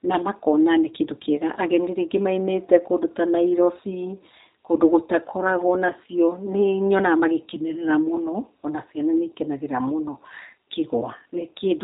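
From start to finish the speech carries G.729 codec damage, consistent with the 8 kbit/s G.729A variant used in VoIP. The codec discards the original waveform and resynthesises each 10 ms frame from a vocal tract filter, a pitch predictor and a few fixed pulses, so voicing comes out slightly rough and synthetic, the damage plainly audible. Bandwidth is capped, with nothing above 3.8 kHz, leaving sibilants dull and the overall sound narrow and telephone-like.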